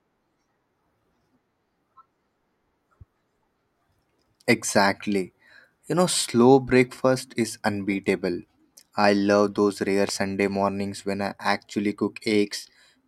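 At 10.09 s, between "I love those rare" and "mornings when I actually", a single loud pop stands roughly 10 dB above the speech, likely from an electrical pulse such as static or a switch.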